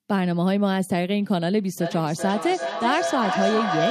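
From 1.78 s to the end, a tone near 700 Hz builds almost to speech level, pulsing about every 0.4 s. This is feedback howl from a loudspeaker-to-microphone loop that gains level on every pass.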